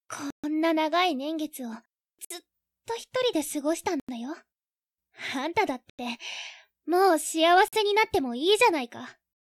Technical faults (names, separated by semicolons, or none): Bluetooth stall